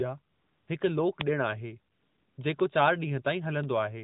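From 0.34 to 0.68 s there is AMR comfort noise. The phone judged the talker silent and stopped sending speech frames for 340 ms. The receiver filled the gap with synthetic noise built from a rough estimate of level and spectrum. The real background drops out. A smooth, even hiss takes its place, then switches back when speech frames resume. The narrowband AMR sound, cut off above 4 kHz, carries on either side.

At 1.21 s a bit error spike appears. A flipped bit pushed a few samples far off their true value, then they snapped back. It sounds like one sharp, broadband tick with no link to the speech.

From 1.94 to 2.38 s comfort noise returns, this time for 440 ms. Again the true background is swapped for steady synthetic noise that cuts in and out at the edges.

Two more bit error spikes follow, at 2.60 s and 3.64 s. Each is a brief, isolated click, heard as a sudden jump spread across the spectrum.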